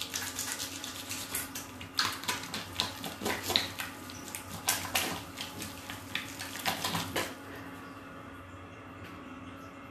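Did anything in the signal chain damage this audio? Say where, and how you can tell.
No, nothing in the chain audibly damaged this sound.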